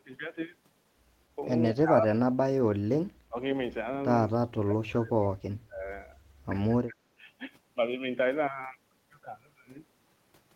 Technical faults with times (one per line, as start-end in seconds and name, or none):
1.73-2.48 speech suppressed in double talk
3.29-3.36 speech suppressed in double talk
4.51-5.84 speech suppressed in double talk
6.68-7.10 speech suppressed in double talk